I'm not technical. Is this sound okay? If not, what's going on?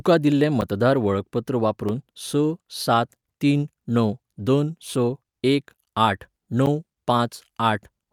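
No. The speech has three blocks of digital silence, at 0.61, 1.89 and 6.66 s, lasting 10, about 3.6 and 10 ms. Each time, the sound drops instantly to nothing and snaps back, which you hear as a brief tick, probably because the playback software fell behind.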